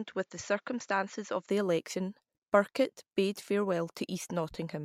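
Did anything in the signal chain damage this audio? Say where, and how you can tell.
Yes. From 0.0 to 1.5 s, before "the election", the audio is band-limited with nothing above 7.6 kHz, about 5 dB quieter, and carries its own faint noise roughly 50 dB down. It then clears with no gap, which points to a driver-level input switched to a poorer device, likely.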